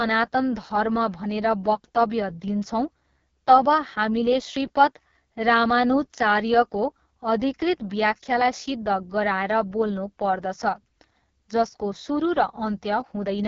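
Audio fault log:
throughout: AMR wideband (HD Voice) codec. Rough, raspy speech with nothing above 7.4 kHz, which fits the lowest AMR-WB mode, around 6.6 kbit/s.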